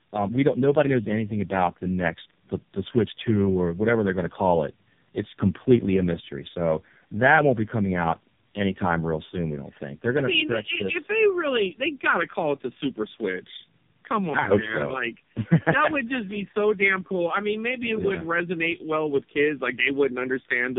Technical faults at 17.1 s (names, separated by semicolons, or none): tandem speech coding